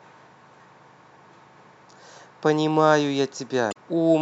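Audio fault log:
3.70–3.77 s, damaged data in a compressed stream: a burst of about 70 ms near the end of the speech turns into a short chirp, squawk, click or hole. Part of the compressed data at this point is corrupted, so the decoder either misinterprets the affected frames, producing nonsense spectral content, or rejects them. In doing so it loses frame sync and has to scan forward for the next valid frame header before normal decoding of the speech resumes.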